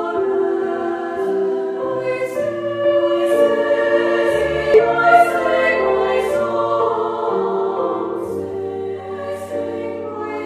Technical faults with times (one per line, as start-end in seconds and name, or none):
4.74-4.79 damaged data in a compressed stream